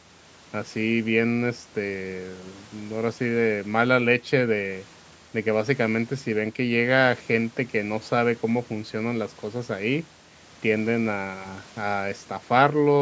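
Speech recording, no technical faults.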